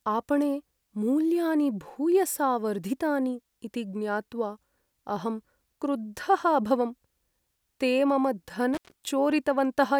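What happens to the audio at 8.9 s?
That's an intermittent contact, right after "ते मम": from 8.74 to 8.92 s a loose connection opens for about 130 ms, dropping the speech to faint hiss with crackle at both edges.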